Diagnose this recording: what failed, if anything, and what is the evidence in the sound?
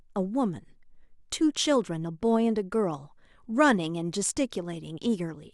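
Clock slip clicks, converter stage: faint ticks about every 30 ms from 0.12 to 5.53 s, likely from unsynchronised clocks. Their steady rhythm sets them apart from random dropouts.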